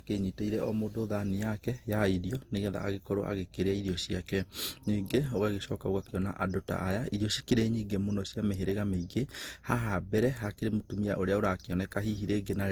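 Generation loss runs through the whole of this speech recording: it sounds swirly, smeared and hollow, with softened attacks. The likely cause is repeated lossy re-encoding, about four passes through something like 48 kbit/s Opus, each requantising on a shifted frame grid so that noise and spectral gaps accumulate.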